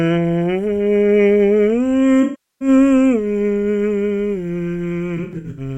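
Music with AAC frame loss with concealment: the decoder loses frames from 2.22 to 2.68 s, then in short scattered runs of up to about a tenth of a second from 5.17 to 5.60 s. It rebuilds the missing audio from the last good spectrum, so each gap sounds smeared or noisy.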